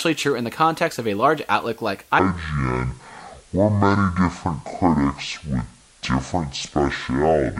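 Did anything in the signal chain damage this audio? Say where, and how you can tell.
Yes. Low bit depth with dither points to the sample-format conversion stage. A steady, even hiss sits under the speech for the whole clip, about 30 dB below the signal. There is no distortion. The sound fits 9-bit samples where dither turned rounding error into white noise.

A section at the wrong speed starts at 2.19 s and runs to the end. The speech drops to about 0.52 times normal speed. Pitch falls together with it, by roughly ten semitones, so it sounds deep and slow. The likely cause is playback or editing against the wrong clock.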